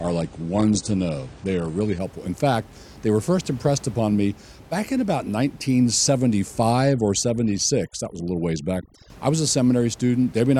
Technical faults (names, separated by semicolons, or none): adaptive stream starting at a low bitrate; overdone noise removal